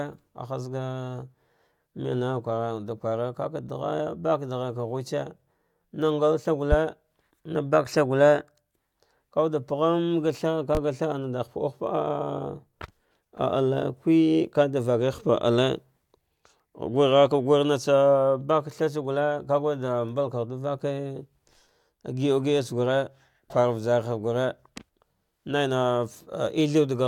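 Loud pops hit at 6.72 to 6.76 s and 10.75 to 10.79 s, well above the speech. Each is a single sharp thump. The likely cause is a brief voltage spike.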